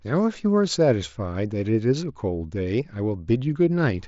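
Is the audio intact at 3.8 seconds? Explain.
Yes, the speech at 3.8 s comes through intact, with no dropout, glitch or distortion at that moment.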